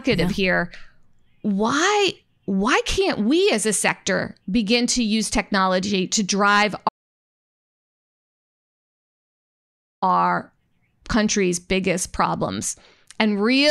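Speech clip with an audio dropout to silence after "use technology to drive", 6.89 to 10.02 s: about 3.1 s of flat silence, blank on a spectrogram, likely from lost input.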